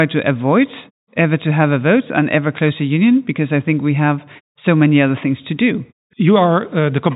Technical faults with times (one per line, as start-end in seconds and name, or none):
none